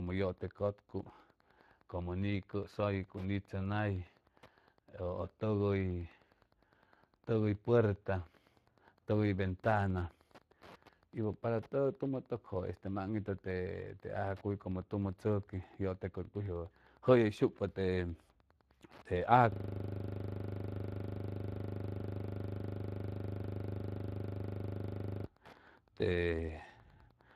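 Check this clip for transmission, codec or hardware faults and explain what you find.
Three faults are present: two run through the whole clip and one occupies a stretch near the end.

Wi-Fi interference is present throughout. A nearby Wi-Fi radio's beacon, sent every 102.4 ms, is being rectified by the audio circuitry, producing a steady ticking close to ten times per second. It sits well below the speech, roughly 30 dB down.

Speex codec damage is also present throughout and is plainly audible. This CELP speech codec, at a setting that points to roughly 22 kbps, starves the excitation of bits, so the speech sounds noisy and hoarse. Nothing is present above 14.9 kHz.

A system hang loop runs from 19.52 s to 25.25 s. The machine or driver froze while the sound hardware kept replaying the same 40 ms buffer, repeating it well over a hundred times. The result is a steady buzz at 25 Hz in place of continuing speech.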